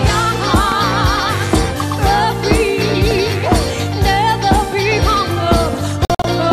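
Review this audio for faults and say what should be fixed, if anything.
A sudden voltage step, likely from a plug, switch or static discharge, was added to the signal, causing loud pops. A double pop sits at 0.72 to 0.86 s, peaking around 10 dB above the audio, and a single pop at 3.11 to 3.13 s is roughly 5 dB above it. The sound continues underneath both. Securing connections, grounding properly and muting before switching would prevent these.

A digital broadcast dropout occurs when the receiver loses the digital stream and mutes until valid frames return. Between 6.05 and 6.25 s the sound drops out in short holes totalling 120 ms, the longest 48 ms, which fits about five lost frames. Stronger reception or error-protected delivery would avoid it.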